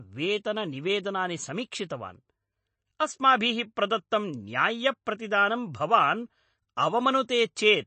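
From the first moment the speech carries MP3 compression that is plainly audible. The sound is watery and swirly, s sounds turn to metallic chirps, and consonant attacks smear. The likely cause is an encoder starved of bits, at a rate that fits about 32 kbps. It drops weak frequency lines and cuts the treble flat. On a spectrogram everything stops at 8.3 kHz, with patchy holes flickering on and off below it.

From 0.64 s to 7.34 s, faint clock slip clicks tick at a steady rate of roughly one every 0.7 s, about ten in all, most noticeable during sustained voiced sound. The likely cause is two devices running on unsynchronised clocks that differ by roughly 30 parts per million, so a single sample is dropped or repeated each time the drift adds up to one whole sample. A waveform shows a tiny step at each slip. A spectrogram shows a thin broadband vertical line at each one.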